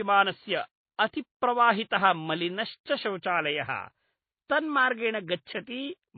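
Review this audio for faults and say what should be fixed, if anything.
Throughout the speech the sound is dull and band-limited, with nothing above 4.5 kHz, and it carries two layers of different artefacts heard together. That combination likely comes from transcoding between lossy codecs, with a low-rate HE-AAC stage followed by a low-rate MP3 encode. The second codec wasted bits re-coding the first one's damage while adding its own, and the lowest cut-off survived. To prevent it, encode once from the original uncompressed source at an adequate bitrate rather than re-encoding an already compressed file.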